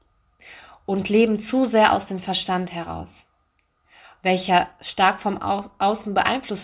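No audible technical faults occur anywhere in this speech.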